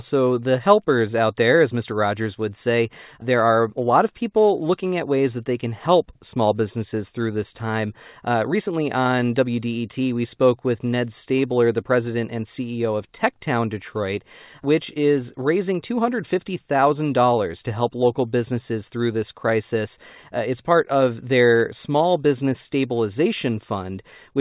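Nothing's wrong here: it's a speech recording carried over ordinary mu-law telephone coding at 8 kHz, and that path is simply doing its usual job without any technical faults to point at.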